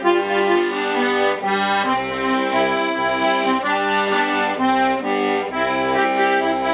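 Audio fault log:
Nothing stood out on listening, and there is no fault to log.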